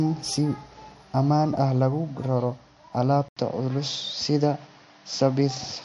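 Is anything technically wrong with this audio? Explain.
Yes, two things. The whole clip has MP3 compression damage: nothing above 11.3 kHz, with a watery, swirly texture that fits a bitrate of around 48 kbps. At 3.29 s the input was switched to a poorer device, likely another mic or a headset. After an 80 ms gap, the band stops at 7.6 kHz, and the sound turns duller with a faint new noise floor, though the level stays about the same.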